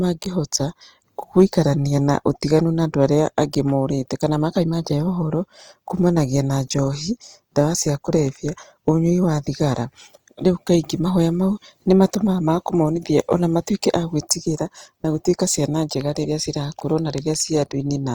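Throughout the speech, a low-rate encoder, likely Opus in its music mode at around 24 kbps, fills starved bands with substitutes, leaving tones plainly grainy and rough across the full bandwidth. Hard clipping follows at 1.39 to 1.59 s, 3.02 to 3.38 s, 7.59 s, 8.88 s, 11.91 to 12.03 s and 13.20 to 13.34 s: peaks exceed what a stage can pass by up to about 2 dB and are cut flat, adding brief crackle on those loud moments.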